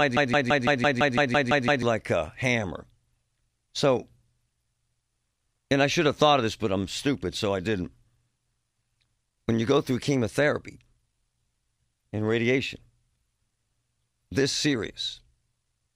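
From the very start until 1.82 s, the sound is caught in a broken-record loop: a fragment of about 168 ms repeats exactly, back to back, about ten times, already under way when the clip opens. This is likely a stall in the player, encoder or stream, which kept resending the last buffered piece. Whatever should have played in that interval is missing, and normal speech resumes with "like a hammer".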